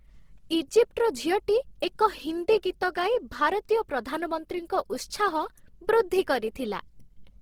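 Throughout, the speech sounds grainy and rough, with bands filled by noise. This is likely Opus compression in CELT mode at a rate consistent with about 16 kbps.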